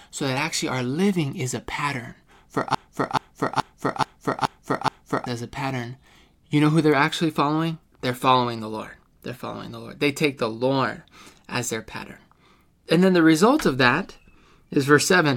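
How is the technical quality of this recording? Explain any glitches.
There's one clear glitch in this speech recording, a broken-record loop running from about 2.75 s to 5.26 s. A short chunk of roughly 0.43 s gets repeated six times back to back, identical every pass, so you hear the same snippet stuttering instead of the talk moving on. The likely culprit is a stalled player or stream that kept re-sending the last fragment it had buffered. Whatever should have been said in those two and a half seconds is simply gone.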